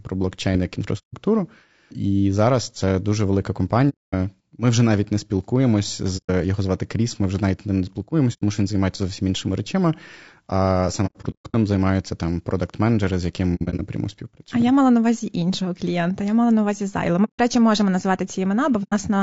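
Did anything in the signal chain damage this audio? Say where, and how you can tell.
Yes. At the codec stage, the speech is rough and grainy throughout, with noise between harmonics. This is likely low-delay AAC compression (AAC-ELD at about 32 kbps), not broadband hiss.

At the network stage, AAC frame loss with muting leaves soft-faded holes, unlike hard dropouts, at 0.98, 3.89, 6.17, 8.33, 11.06, 13.55, 17.24 and 18.83 s. Most are single holes of 90 to 240 ms; at 11.06 and 13.55 s the lost frames are scattered over about 480 and 240 ms.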